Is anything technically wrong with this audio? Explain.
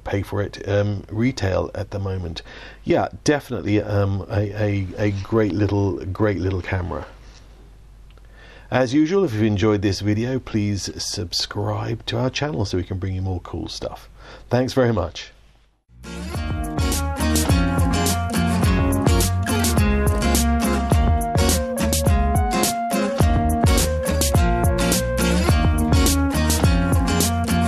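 No, nothing technically wrong turns up here; the audio sounds just as it should the whole way.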